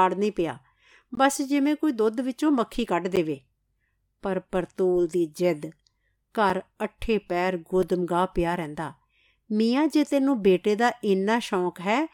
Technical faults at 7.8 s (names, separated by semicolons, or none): block of digital silence